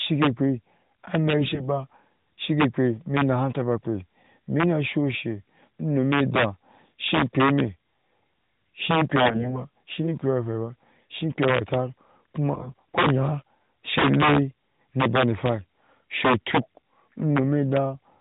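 Integer overflow runs through the whole clip. The signal was driven about 8 dB too hot, and roughly one sample in a hundred crossed the integer ceiling. Those samples wrapped to the opposite extreme instead of clipping, so loud syllables carry violent, brittle cracks far harsher than ordinary distortion. On the waveform, peaks that should flatten jump straight to the opposite sign. On the spectrogram, each one is a thin vertical streak of broadband energy.

AMR bit errors strike at 1.40–1.69 s, 9.22–9.64 s and 12.54–12.97 s, just before "yan shi le na". The error rate starts near 5% and roughly doubles by the last burst. Flipped low-priority bits misplace the excitation pulses and skew the pitch, gain and spectral values, so the speech keeps its rough pitch and level but turns hoarse, scratchy and gargly. On a spectrogram the harmonics smear into noisy, irregular texture below the 4 kHz ceiling of the narrowband codec. 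That codec itself leaves only light coloration, consistent with its 12.2 kbps mode.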